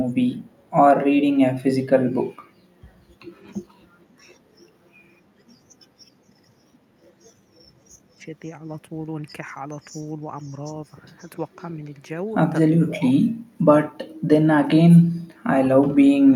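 At 8.17 s and again at 11.56, 12.87 and 13.44 s, the speech dips by up to about 25 dB, deepest near 13 s. This is likely speech suppressed in double talk, with the echo canceller ducking both its own talker and the loudspeaker echo. At 10.44 and 11.19 s, a faint copy returns 520 ms late. This is likely echo leak through a loudspeaker path.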